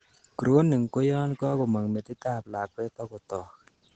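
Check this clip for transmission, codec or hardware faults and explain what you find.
The clip has one codec fault, Opus voice compression, present from start to finish. The speech encoder ran in its SILK linear-prediction mode at a low rate, which fits roughly 12 kbps in wideband mode. SILK models the voice as a filter driven by a coarsely quantised excitation signal and discards the upper band, so nothing sounds above 8.9 kHz. The speech sounds muffled, with plainly audible hoarseness and a faintly robotic, synthetic edge.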